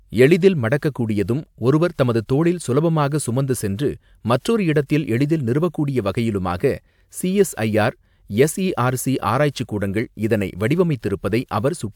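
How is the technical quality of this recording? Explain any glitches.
No audible glitches or faults.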